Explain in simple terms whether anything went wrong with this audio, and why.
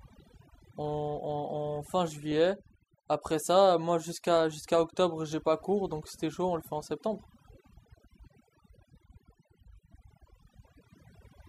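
Overdone noise removal runs through the whole clip. A cleanup tool was pushed too hard, so whenever parts of the sound sat close to the background noise it shut them off. The pauses go dead quiet with little twinkly specks.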